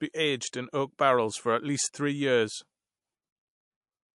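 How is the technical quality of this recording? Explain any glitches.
The quality is noticeably degraded: throughout, the speech sounds watery and swirly, with chirpy, metallic edges on s sounds, smeared consonant attacks and nothing above 11.3 kHz. That points to likely MP3 compression at a low bitrate, where the encoder cuts the treble at a fixed frequency and drops weak frequency lines that flicker on and off from frame to frame.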